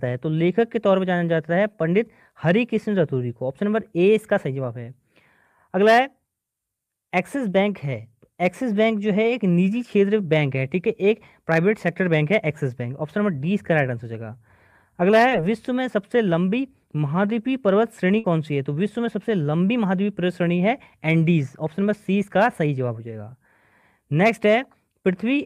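The audio has two network-loss faults of different sizes. From 15.29 to 15.33 s there is a short concealed packet loss. About 20 ms of audio failed to reach the decoder in time, and the receiver patched roughly 15 ms of it by extending the preceding sound before blending back into the real signal. It comes across as a brief smear or wobble rather than an audible jump.

From 18.19 to 18.26 s a burst of packet loss takes out about 60 ms. Here the concealment runs for around 51 ms, stretching the last sound into a held buzz or fading hiss, and then the audio resumes further along with the missing stretch skipped. The longer synthetic tail and the forward jump are what separate it from the brief patch at 15.3 s.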